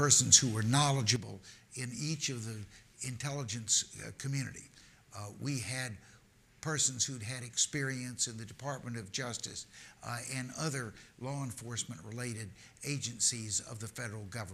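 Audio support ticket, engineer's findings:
Sudden gain jump at 1.16 s: digital gain likely stepped by about -8 dB between adjacent samples, with no ramp, as from a setting change or bit shift. Sound and noise floor drop together and stay lower until the end.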